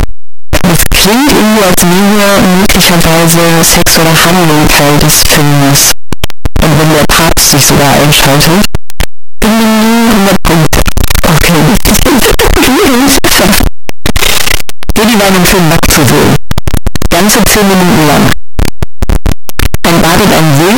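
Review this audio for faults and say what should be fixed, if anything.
Signed and unsigned mixed up, throughout the clip: the speech carries a constant, very loud, harsh distortion, and the soft sounds are as loud as the strong ones. The likely cause is 8-bit samples read with the wrong sign convention, which flips the top bit so every zero crossing jumps across the full range. Prevent it by declaring and checking sample signedness wherever 8-bit data is written or read.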